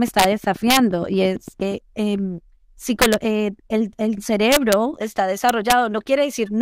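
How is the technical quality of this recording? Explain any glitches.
The recording has two technical faults: a burst of regular clicks near the start, and repeated sharp cracks on loud passages of the speech.

A train of clicks runs from 0.08 to 1.73 s: about fifteen near-identical pulses at a steady 8.6 per second, roughly as loud as the speech itself. They tick over both the speech and the gaps. The likely cause is interference or a faulty connection or power supply injecting pulses.

Integer overflow occurs at 0.19 to 0.24 s, 0.70 to 0.77 s, 3.02 to 3.14 s, 4.52 to 4.73 s and 5.49 to 5.72 s. Peaks exceeding the integer limit by about 1 to 2 dB wrap to the opposite sign instead of clipping, giving violent cracks far harsher than clipping.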